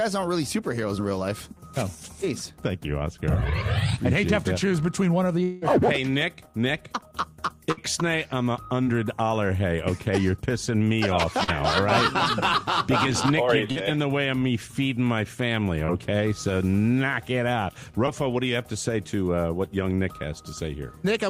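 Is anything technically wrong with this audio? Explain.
Yes, the audio has gaps from lost network data, each patched over by the receiver.

Long network dropout, 5.43 to 5.64 s: about 180 ms of audio likely never arrived, and the receiver filled nearly the whole gap by extending the last sound it had. That stretch comes across as a held buzz or hiss that fades rather than falling to silence. The sound then picks up further along, with the missing portion simply gone.

Burst of packet loss, 7.72 to 7.79 s: roughly 60 ms of consecutive data was lost or arrived too late to play. The decoder bridged the hole by continuing the previous sound and lowering its level across the gap, giving a brief held tone or fading hiss. Playback then jumps ahead, so that short piece of the sound is skipped.

Short concealed packet loss at 8.83 to 8.88 s, 11.44 to 11.50 s, 13.72 to 13.77 s, 15.85 to 15.90 s, and 18.06 to 18.09 s: in each, 20 to 40 ms failed to reach the decoder in time. 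The receiver synthesised a stand-in from the preceding sound, pitched or noise-like as fits, then crossfaded back into the real signal. Each is heard as a momentary smear or wobble, and a brief transient there can drop out.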